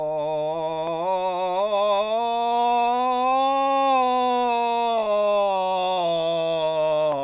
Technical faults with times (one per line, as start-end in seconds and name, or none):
none